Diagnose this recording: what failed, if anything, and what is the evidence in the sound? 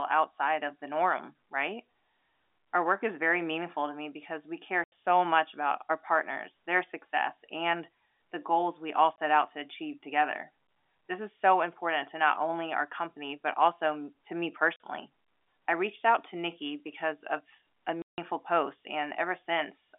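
The network dropped packets and the receiver filled the gaps with silence, so this is packet loss filled with silence. There are hard-edged holes at 4.84 s after "me because we care" (80 ms), at 9.16 s (20 ms), at 14.76 s after "but also to me" (40 ms), and at 18.02 s after "because of a" (160 ms, the worst). Every gap is a multiple of 20 ms, which fits 20 ms packets. The cuts interrupt the narrowband telephone sound.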